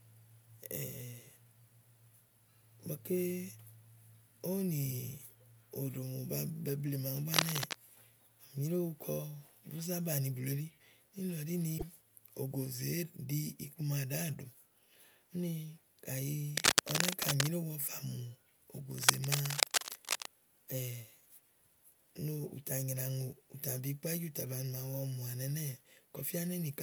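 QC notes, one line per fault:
7.33–7.75 s, 16.57–17.47 s and 18.90–20.26 s: cable scratch noise. A worn cable, connector or control was likely moved while recording. Its contact resistance jumped around rapidly, so dense, irregular bursts of noise were added on top of the speech. Each burst sits roughly 5 dB above the speech and is heard as scratching or rustling. The bursts last about 0.4 s, 0.9 s and 1.4 s.
11.74–11.83 s: damaged data in a compressed stream. A short stretch of the encoded stream was corrupted, so the decoder misread those frames, lost sync and had to hunt for the next valid frame header. The result is an abrupt glitch of about 84 ms in the speech.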